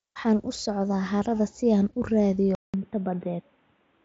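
At 2.55 s the sound drops out for about 0.19 s. It then returns dull and boxy, with nothing above 3.8 kHz, down from about 7.8 kHz through the mSBC headset link. The level holds steady. A faint new hiss appears. This likely reflects an input switched to a poorer device.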